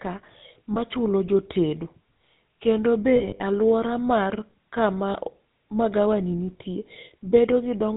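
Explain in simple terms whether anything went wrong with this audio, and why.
The whole recording went through the GSM full-rate codec, an old mobile-phone voice system. It rebuilds speech from a rough model and drops everything above 4 kHz. So voices sound muffled, buzzy and gravelly from start to finish.

There are also lost GSM frames. Small pieces of the signal went missing, and the phone system filled each gap by repeating the last good piece. You hear this as a brief metallic ring at 0.74 to 0.78 s. It happens again from 3.16 to 3.41 s, as several short dropouts just before "aluora mar kama". The longest of these lasts well under a tenth of a second. The last one is at 5.10 to 5.18 s, between "be aluora mar kama" and "magawani nitie".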